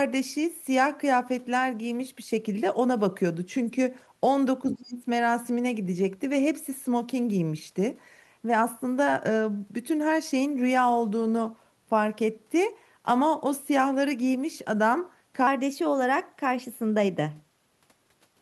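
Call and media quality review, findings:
Other side's voice leaking through, 4.70–4.75 s: brief scrap of far-end audio, roughly 15 dB below the talker, in the mic signal. Likely echo canceller residual. Loudspeaker playback reached the mic and adaptive filter left it uncancelled.

Speech suppressed in double talk, 4.71–5.07 s: talker's level dips, deepest around 25 dB, over about 0.4 s while far end is active. Likely AEC suppressor misjudging double talk, attenuating near-end along with echo.

Section at the wrong speed, 15.47 s to end: playback runs 1.12x fast, pitch up about 2 semitones, sound hurried and raised. Likely clock or resampling mismatch in player or editor. Speed and pitch shift together, no time-stretch.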